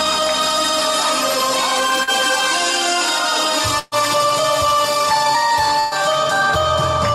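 Around 2.03 to 2.10 s there's a short concealed packet loss. About 40 ms of audio never made it to the decoder in time, and the receiver patched roughly 38 ms of it by carrying the preceding sound forward before easing back into the real signal. You hear it as a quick smear or wobble rather than a dropout.

Then come two bursts of packet loss, at 3.79 to 3.95 s and again at 5.80 to 5.94 s. Each time about 120 ms went missing in one go, which is a few packets in a row. The receiver stretched the last sound across the hole, about 124 ms in the first case and 117 ms in the second, and faded it as it went, with no silent gap at all. So you get a held, dying tail, and then the audio jumps ahead with that stretch simply gone.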